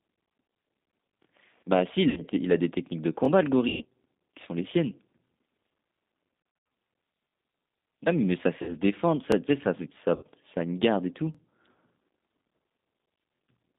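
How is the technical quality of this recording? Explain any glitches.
The recording has clear technical problems. A narrowband codec runs through the whole clip. It is broken by six packet-loss dropouts and six regular stutters from overlapping chunks.

G.729 codec: This affects the entire clip. It is G.729A at 8 kbit/s, and the line passes only 200 Hz to 3.7 kHz. The speech is rebuilt from a vocal tract model and a few pulses per frame. That makes it sound thin, rough and plainly synthetic.

VoIP packet loss concealed by the speech codec: This happens at 2.10–2.22, 3.68–3.85, 6.42–6.70, 8.62–8.74, 10.15–10.24 and 11.72–11.76 s. The gaps last 60, 120, 200, 60, 60 and 40 ms. At 6.42 s, 200 ms is lost across 280 ms, with a longest run of 80 ms. The decoder extends its last pitch and filter at falling gain. So each gap is stretched into a fading buzz or coloured noise, and the speech stays weak briefly afterwards.

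Overlapping chunks: These occur at 3.25–3.28, 5.28–5.30, 7.30–7.32, 9.32–9.35, 11.35–11.37 and 13.37–13.39 s, about 2 s apart. Each new 2 s chunk starts 23 ms before the last one ended. That 23 ms replays at every join, which is heard as a click or stutter.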